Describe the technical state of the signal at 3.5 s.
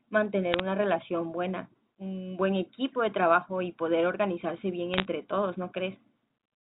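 At 3.5 s the speech is intact, carried through G.711 telephone coding that limits it to the telephone band and adds no audible fault at this point.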